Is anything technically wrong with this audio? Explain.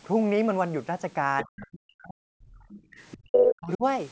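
Yes. The echo canceller in this call is struggling, and three kinds of fault can be heard.

Other side's voice leaking through, at 1.38 to 1.44 s, 2.70 to 2.81 s and 3.32 to 3.50 s. A second voice appears in short scraps. The first two are well below the talker. The last is slightly louder than the talker. The likely cause is the far end playing on a loudspeaker, with the canceller failing to subtract all of it from the microphone.

Speech suppressed in double talk, at 1.44 to 2.28 s and 3.13 to 3.84 s. The talker's voice sinks sharply, almost to silence at its deepest, and comes back in pieces. Both episodes sit right beside the leaked voice. Both sides were likely talking at once, and the canceller could not tell its own talker from the echo. It turned everything down.

Background gated by the echo canceller, at 2.56 to 2.85 s. The room sound dips by about 17 dB for roughly a fifth of a second, then returns. 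The canceller clamped the microphone while the loudspeaker was active, and the room tone dropped with it. The stray voice at 2.70 s lands inside this dip. The audio has no content above 8 kHz, which fits the normal band limit of call microphone processing.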